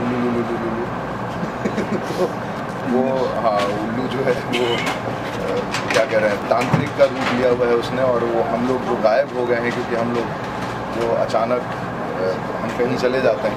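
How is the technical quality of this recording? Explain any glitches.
The quality takes a hit from one recurring glitch. From 3.36 to 10.5 s there are periodic USB or driver dropouts, about one every 1.02 s. Something keeps stalling the audio path, so a few milliseconds get skipped each time. You hear steady, evenly spaced ticks wherever there's signal.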